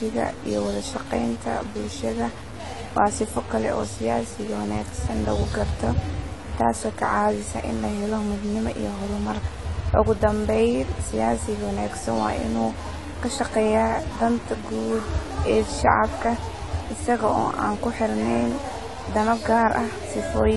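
From start to finish the speech carries a distortion, and the gaps between phrases are filled with a gritty noise floor instead of falling quiet. This is most likely a stuck bit, where one bit of each sample is held at a fixed value, so about half the samples are shifted by that bit's weight. On a waveform the pauses show a fuzzy band of offsets where silence should be. On a spectrogram there is a broadband haze under and between the speech.

Throughout, the sound is also dull and smeared, with a warbling, fizzy texture on sustained vowels and sibilants. This is plainly audible AAC compression. The codec has coarsely quantised its frequency lines, which fits a bitrate around 32 kbps. A spectrogram shows a hard ceiling, with nothing above about 11.5 kHz, and the band beneath is broken into patchy holes and blocky, noise-filled regions that shift from frame to frame.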